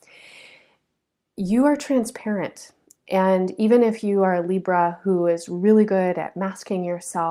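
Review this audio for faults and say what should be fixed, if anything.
Nothing needs fixing, because no technical fault can be heard anywhere in this speech recording.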